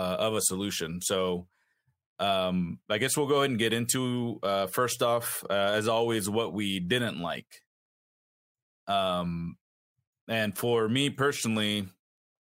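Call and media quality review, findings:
Nothing stood out on listening to the speech recording.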